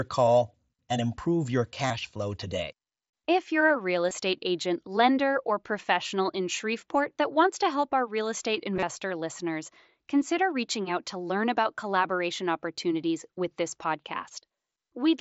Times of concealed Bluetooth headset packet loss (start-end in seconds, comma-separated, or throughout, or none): 1.88-1.90, 4.09, 8.76-8.83